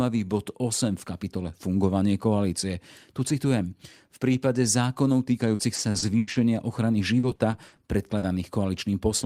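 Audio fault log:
5.55–6.38 s and 7.19–7.80 s, repeated packet loss (robotic sound): choppy stretches with pieces missing, beginning just after "prípade zákonov". Audio kept dropping out, and each hole was patched by repeating the last sound. The longest gap is 90 ms in the first stretch and 40 ms in the second.
8.18–8.25 s, short concealed packet loss: a brief smear or wobble. About 40 ms of audio failed to arrive in time, and the receiver bridged the hole by extending the preceding sound before blending back into the real signal.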